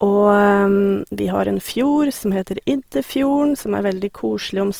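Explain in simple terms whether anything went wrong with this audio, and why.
Throughout the speech, sounds come across grainy and rough. This is likely Opus compression, which saved space by filling fine detail with noise.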